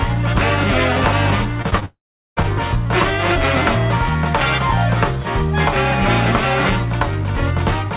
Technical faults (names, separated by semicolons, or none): short concealed packet loss; long network dropout